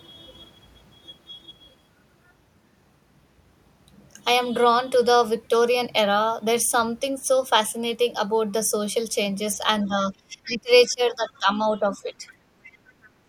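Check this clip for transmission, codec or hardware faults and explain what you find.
Two faults turn up near the end of this speech clip, both pointing to an echo canceller struggling during double talk.

Speech suppressed in double talk, 9.88 to 10.70 s, 10.87 to 11.48 s and 11.69 to 12.25 s: while both ends talk at once, the echo canceller likely cannot tell the local talker from the loudspeaker echo and turns everything down. The voice sinks deeply in the first stretch, by roughly 25 dB, then less in the later two, dipping.

Other side's voice leaking through, at 10.44 to 10.48 s, 11.28 to 11.38 s and 12.64 to 12.78 s: the far-end voice played on the loudspeaker is likely not fully removed from the microphone signal. Brief, faint scraps of that second voice slip through, well below the talker, about 20 to 30 dB down, and short.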